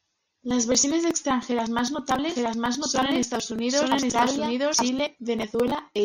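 From 2.29 to 4.89 s, after "versiones extranjeras más", a doubled audio track appears: a second copy of the speech runs at about the same level, roughly a second behind, likely from a duplicate capture path.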